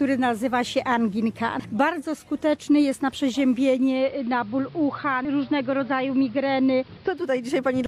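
Digital radio blending to analogue from 3.58 to 7.55 s: the receiver fell back to AM, so the sound loses treble, drops about 3 dB and gains faint hiss.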